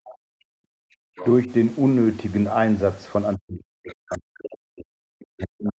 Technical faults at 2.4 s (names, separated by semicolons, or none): none